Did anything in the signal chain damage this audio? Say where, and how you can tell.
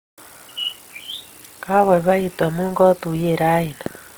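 Yes, at the codec stage. The speech sounds plainly grainy and rough throughout, yet the top end still reaches about 20.3 kHz, so it isn't muffled. That's likely Opus compression in CELT mode, filling bit-starved bands with folded spectrum and noise, consistent with about 24 kbps.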